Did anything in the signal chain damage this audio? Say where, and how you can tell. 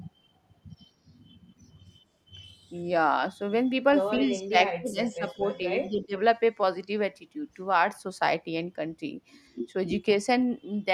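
Yes, in call processing. Echo leak: a faint copy trails 195 ms behind at 4.15–4.19 s and 4.89–5.13 s, likely uncancelled loudspeaker pickup.

Speech suppressed in double talk: level drops roughly 20 to 30 dB at 4.19–4.56, 4.77–5.41 and 5.89–6.14 s. Overlapping talk likely made the canceller duck everything.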